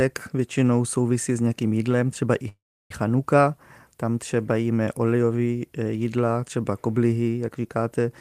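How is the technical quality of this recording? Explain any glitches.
The recording has one glitch, a call audio freeze from 2.48 to 2.91 s, right after "nějakým jídlem třeba i". The last sound is drawn out briefly and then drops to silence for about 0.32 s, before speech resumes exactly where it left off, with nothing skipped. The likely cause is packets held up in transit, draining the jitter buffer, so the receiver filled the wait and everything after plays about 0.42 s later.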